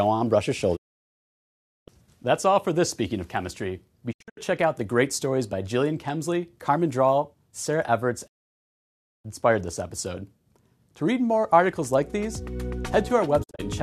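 Digital broadcast dropout mutes the audio to clean, hiss-free silence after 20 ms fades at 0.75 s (about 1.1 s), 4.11 s (scattered holes), 8.26 s (one second) and 13.42 s, unlike analogue fading's rising noise.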